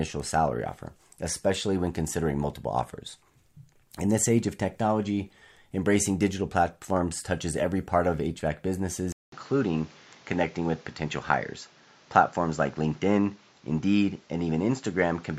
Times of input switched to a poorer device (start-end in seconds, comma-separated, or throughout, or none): 9.12-15.39